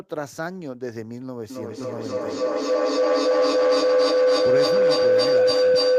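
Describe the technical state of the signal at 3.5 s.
Feedback howl from 1.5 s on: the microphone-speaker loop rings around 500 Hz, about 11 dB above speech, repeating roughly every 300 ms, a bright spectrogram line.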